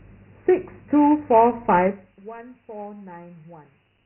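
From the start, the speech carries Dialogic VOX ADPCM coding: nothing reaches above 3.7 kHz, and a heavy gritty hiss trails the speech. The coarse 4-bit prediction can't track the waveform closely, and the sound points to a 24 kbps stream at 6,000 samples a second.

Then, from 1.84 to 2.2 s, the level drops by around 20 dB in 2 dB jumps with no smoothing, roughly thirty a second. Each jump clicks, so you hear zipper noise, a fast ticking riding on the speech while it fades.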